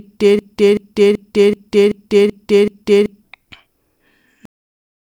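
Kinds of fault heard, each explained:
broken-record loop: The playback or streaming chain likely stalled and kept resending the last fragment it held, so a 0.38 s piece of speech repeats exactly, back to back, seven times from 0.39 s to 3.24 s, and the speech that belonged there is lost.
cut-off end: The final buffers were never written or played out, so the speech stops abruptly in the middle of a sound at 4.45 s and drops straight to digital silence with no natural decay, leaving the last half second empty.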